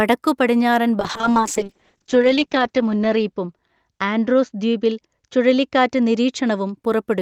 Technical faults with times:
1.00-6.83 call bitrate drop

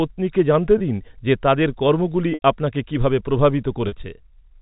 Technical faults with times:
0.78-0.80 packet loss with pitch repetition
2.34-2.42 packet loss with pitch repetition
3.88-3.92 packet loss with pitch repetition

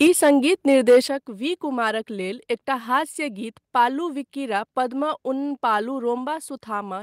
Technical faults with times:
0.00-0.31 microphone overload
0.07 microphone volume stepped down
0.69-0.98 microphone overload
1.08 microphone volume stepped down

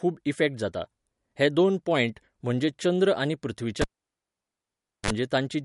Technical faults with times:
0.00-5.65 MP3 compression
3.81-5.10 cable pulled and plugged in

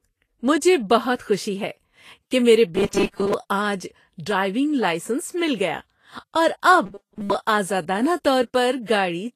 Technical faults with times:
0.00-9.36 Vorbis compression
1.16-1.19 pre-echo
2.75-3.34 robotic sound from repeated short buffers
6.86-7.34 robotic sound from repeated short buffers

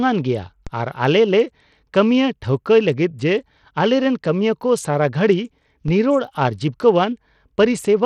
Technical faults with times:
0.00-8.06 Bluetooth SBC compression
0.67 DC step
5.88 DC step

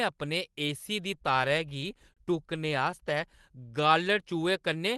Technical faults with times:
1.37-2.94 repeated stalls (stutter)
3.30-3.93 jitter buffer slow-down

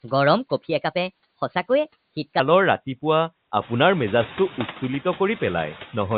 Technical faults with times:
0.00-6.18 noise suppressor artifacts
0.00-2.39 section at the wrong speed

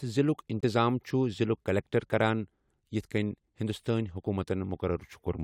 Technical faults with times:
0.61-0.64 corrupt frame muted

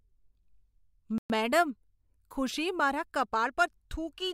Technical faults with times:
1.18-1.30 Bluetooth stall

